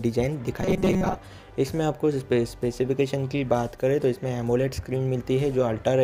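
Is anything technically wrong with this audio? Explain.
Yes. From 0.62 to 1.16 s there is robotic sound from repeated short buffers. The audio becomes a rigid, metallic buzz at 188 Hz. Most of that stretch is likely one chunk of about 5.3 ms replayed over and over, filling gaps where fresh audio came too late.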